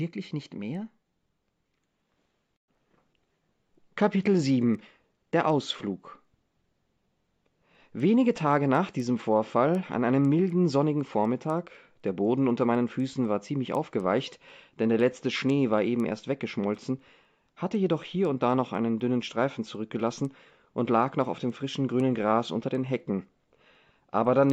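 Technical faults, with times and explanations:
Throughout: resampler restarted on every block. Each 250 ms block was converted separately, which fits a 16 kHz to 48 kHz conversion, so every block edge lacked its true neighbouring samples. The resulting edge errors sound as small regular ticks at 4 Hz, present only while signal plays.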